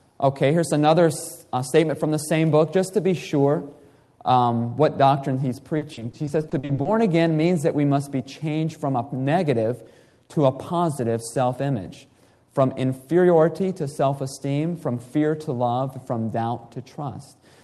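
From 5.77 s to 6.87 s there is repeated packet loss, giving a robotic sound. About a dozen short dropouts, none longer than 40 ms, fall within that second. Each is bridged by extending the preceding sound, so roughly 320 ms, close to a third of the stretch, is concealment rather than real signal. The result is choppy, with fragments missing. The surrounding audio carries the band limit of the call codec, near 12 kHz, consistent with Opus.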